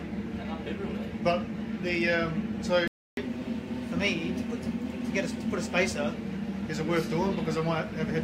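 A playback stall cuts the audio to silence from 2.88 to 3.17 s, a gap of about 0.3 s, before the sound picks up again. The likely cause is the player running out of buffered data or its output thread being briefly blocked, leaving nothing to send to the output. Catch-up at higher speed follows from 3.17 to 6.14 s: the player resamples its backlog at 1.1 times normal speed, so the audio runs faster and sits about one and a half semitones sharp until the lost time is recovered and it settles back to normal.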